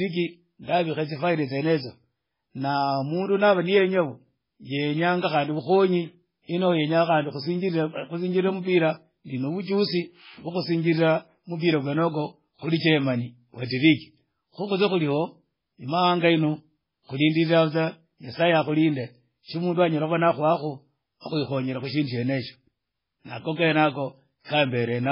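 From the start, the speech has no content above about 5.3 kHz, and the sound turns watery and swirly. That is likely MP3 compression at a very low bitrate, around 16 kbps. Short of bits, the encoder removed the treble at a fixed cut-off and let weak frequency lines switch on and off from frame to frame. That flickering separates it from a plain low-pass filter, which dulls the sound without adding any swirl.

At 24.44 s, a short hiss runs for about 48 ms ahead of a sharp attack, and the attack itself sounds softened. This is pre-echo. The attack landed late in a transform block, and the quantisation noise sized for the loud part spread across the whole block, filling the quiet gap before it. Because the smear comes before the onset rather than trailing after it, it cannot be reverb or an echo.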